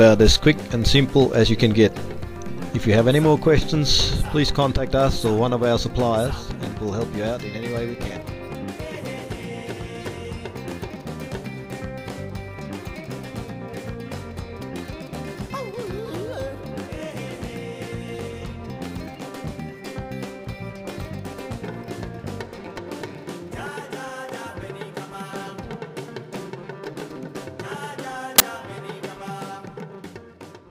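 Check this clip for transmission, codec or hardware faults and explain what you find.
One fault: file tags played as audio at 28.38 s. An embedded cover picture's compressed data was decoded as if it were samples, so a tiny burst of very loud white noise cuts in with hard edges, heard as a sharp snap of static.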